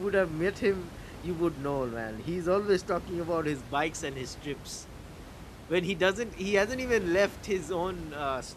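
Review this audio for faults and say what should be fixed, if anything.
Nothing here needs fixing, and the only thing in the background is the room's own noise sitting about 15 dB below the speech, which belongs to the recording itself.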